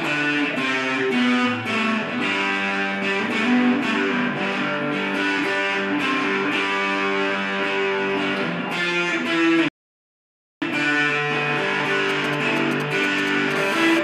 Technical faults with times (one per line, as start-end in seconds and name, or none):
9.68-10.62 rebuffering stall
12.10-13.53 GSM signalling bursts
13.56-13.99 GSM phone buzz